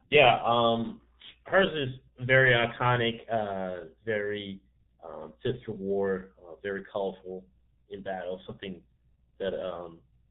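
Throughout, the speech sounds muffled and hoarse, with smeared consonants and nothing above 4 kHz, which fits heavy G.723.1 codec coding at about 6 kbit/s in 30 ms frames.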